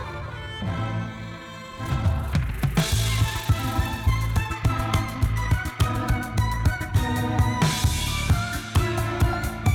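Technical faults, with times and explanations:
0.0 to 6.96 s, time-stretched section: the first stretch runs about 1.58 times faster with the pitch unchanged, so it comes across rushed, then drops back to normal pace. That's likely software squeezing the audio by cutting out short slices.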